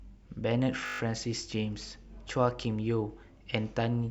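From 0.86 to 1.0 s, a system hang loop repeats one 20 ms slice of speech seven times, producing a brief 50 Hz buzz while the buffer cycled unattended.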